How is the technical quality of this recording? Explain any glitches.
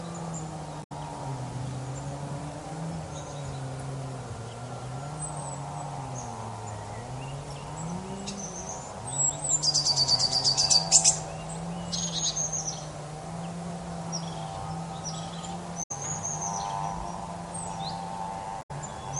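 The recording has three short glitches from damaged data in a compressed stream, at 0.82 to 0.92 s, 15.82 to 15.91 s and 18.61 to 18.71 s. Each lasts about 95 ms. Corrupted bytes make the decoder misread frames and lose sync until it finds a valid header. The result is a brief chirp, squawk, click or short hole.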